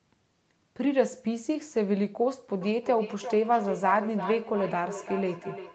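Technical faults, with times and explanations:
2.61 to 5.75 s, feedback echo between two devices: the sound returns roughly every 0.4 s, thinner and more ringing each pass, peaking about 10 dB below the direct speech. A second device replays the far microphone into a nearby microphone, outside either echo canceller's reach.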